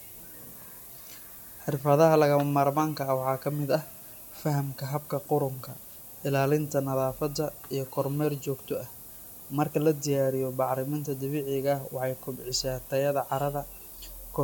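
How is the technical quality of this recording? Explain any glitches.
The technical quality is poor. A steady hiss sits under the speech for the whole clip. It is low bit depth with noise shaping. The audio is stored with only 7 bits, so each sample is rounded coarsely. The rounding error is fed back and pushed toward high frequencies. The result is a thin, constant hiss that grows brighter toward the top of the band. It sits only about 15 dB below the speech.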